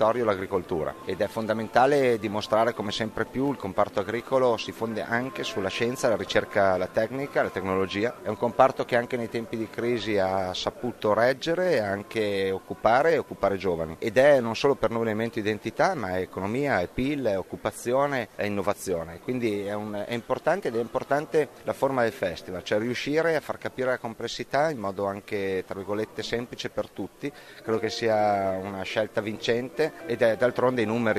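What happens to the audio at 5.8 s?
Nothing goes wrong at 5.8 s; the audio runs through that moment intact, with no dropout, click or other fault to be heard.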